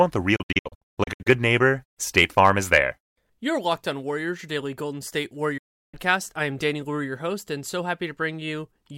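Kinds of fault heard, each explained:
digital broadcast dropout: the receiver lost decodable frames and muted until clean ones returned, so the speech sent meanwhile is gone. From 0.36 to 1.27 s the sound breaks into several short holes totalling 544 ms, the longest 128 ms, sizes that fit 32 ms frames. A second 352 ms mute ends at 5.94 s, just before "I am". A waveform shows flat silent stretches entered through 8 ms fades, and a spectrogram shows blank full-band vertical strips.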